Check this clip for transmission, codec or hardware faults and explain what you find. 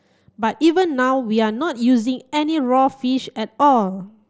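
No faults found in this speech clip.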